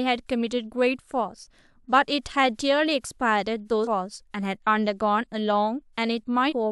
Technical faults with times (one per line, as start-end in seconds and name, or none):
3.83-3.88 compressed frames skipped
6.48-6.53 compressed frames skipped